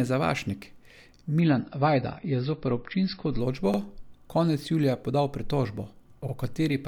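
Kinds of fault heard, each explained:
Overlapping chunks: The audio was cut into blocks of about 2.5 s, and each new block begins 50 ms before the previous one ended, so that sliver plays twice. It shows as a brief stutter at 1.19, 3.74 and 6.29 s, spaced 2.55 s apart. On the waveform each join shows a short segment duplicated back to back with a discontinuity at the seam, and on a spectrogram a thin vertical click line.
Adaptive stream at a lower bitrate: From 1.40 to 3.40 s the stream switched to a much leaner encoding, most likely because the connection slowed, and then switched back. The speech abruptly loses its treble and takes on a watery, swirly codec character, with no gap at either boundary. A spectrogram shows a sharp ceiling near 5.6 kHz, with nothing above it for those two seconds. The sound fits a drop from roughly 128 kbit/s MP3 to around 26 kbit/s.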